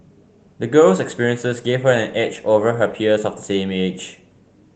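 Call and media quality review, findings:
No faults found; speech carries only the light coding character of Opus voice compression in hybrid fullband mode at about 20 kbps.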